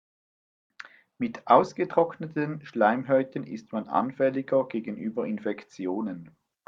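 Speech recording with no audible technical faults.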